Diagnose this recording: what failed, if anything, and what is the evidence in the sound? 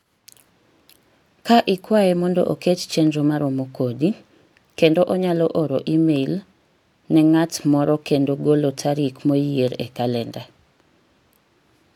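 Nothing failed; no fault is audible anywhere in this recording.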